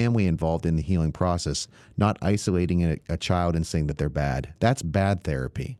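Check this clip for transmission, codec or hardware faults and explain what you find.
Two related faults run through this speech clip, both caused by a timing mismatch between the two ends of the link.

Clock drift between sender and receiver lasts the whole clip. The sender's clock runs about 3% slow, so the receiver's buffer keeps draining. Unlike packet loss, the disturbance is continuous rather than isolated dropouts.

Repeated timing corrections run from 0.02 to 5.52 s. The receiver repeats short slices, adding roughly 150 ms in total and playing at 97% pace. These are uneven, same-direction hiccups rather than one steady slowdown.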